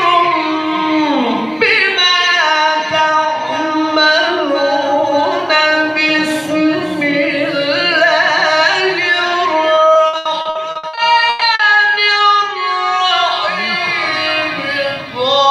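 From 9.75 s to 11.61 s the audio breaks up with repeated packet loss, producing a robotic sound. Data arrives missing or late about a dozen times within under two seconds. Each hole is covered by extending the preceding sound, with the longest gap around 120 ms, so roughly a third of the stretch is filler rather than real signal. The result is choppy audio with short pieces audibly absent.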